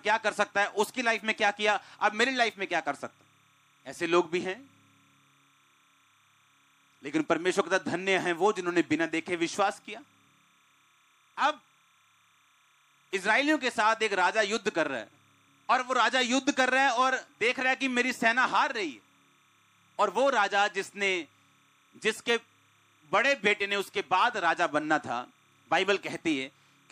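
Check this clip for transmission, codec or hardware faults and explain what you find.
One fault runs through the whole clip. Timecode bleed: linear timecode from an adjacent track or cable leaks in, flipping between tones near 1 and 2 kHz, a faint chirping warble roughly 40 dB down, with a rhythm that fits 29.97 fps code.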